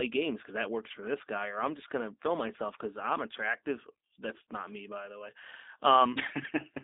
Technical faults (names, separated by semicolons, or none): G.729 codec